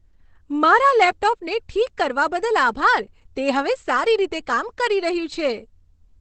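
Opus compression runs through the whole clip, from start to finish. The speech sounds heavily muffled and hoarse, with the brightness above roughly 8 kHz missing. This points to Opus in its speech-oriented SILK mode at wideband bandwidth. At a rate that fits about 12 kbps, the encoder likely models the voice coarsely instead of preserving its fine spectral detail.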